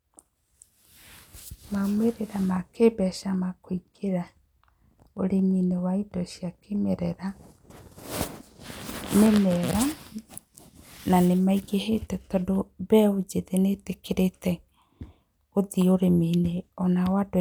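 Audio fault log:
No fault is heard anywhere in the speech. Nothing in the audio calls for an entry in the log.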